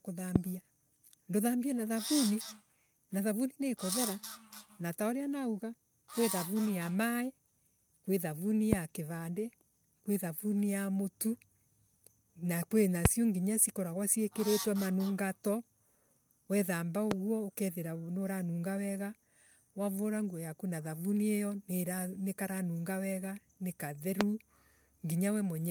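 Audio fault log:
0.36–0.38, 8.73–8.75, 13.05–13.08, 17.11–17.14 and 24.21–24.23 s, loud pop: a brief voltage pulse, likely from a plug, switch, static or driver glitch, entered the signal path each time, giving a single sharp pop about 20 to 25 dB above the speech while the speech carries on underneath. The third comes just before "nginyo cikoragwa ciikiritwe manungato" and the last just after "karanunga wega ni".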